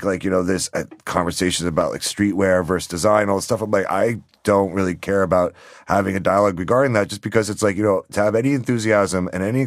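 From 1.81 s to 9.07 s, just after "know this uh conversations", clicks recur every 2.42 s, four or so in all. These are clock drift buffer slips, likely from two clocks disagreeing by roughly 70 ppm, so a handful of samples is dropped or repeated. Unlike packet-loss clicks, they keep strictly even spacing.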